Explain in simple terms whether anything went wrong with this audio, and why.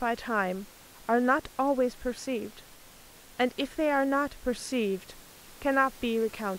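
Nothing went wrong with this speech recording; the faint background noise is just the room the microphone was in, sitting well below the voice.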